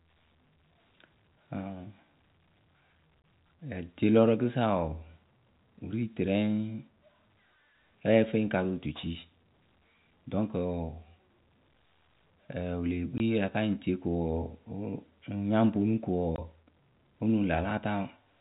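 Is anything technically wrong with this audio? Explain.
Yes, there are three brief dropouts, and they're packet loss filled with silence. At 3.22 s, at 13.18 s (right after "wǝ lee"), and at 16.36 s, the speech cuts out for 20 ms. Each gap fits one missing 20 ms packet that the receiver swapped for dead silence instead of concealing it. The sound stops abruptly and restarts just as sharply. The telephone-band G.711 coding underneath sounds normal.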